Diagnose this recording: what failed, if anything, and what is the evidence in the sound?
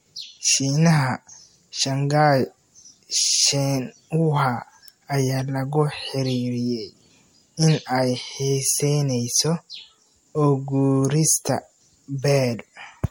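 The codec stage failed: the speech was most likely decoded and re-encoded as MP3 about four times, which fits a 64 kbit/s chain. Throughout, the sound is swirly, smeared and hollow, consonant attacks blur, and nothing remains above 16.6 kHz, showing generation loss as each re-quantisation stacks new noise and spectral holes.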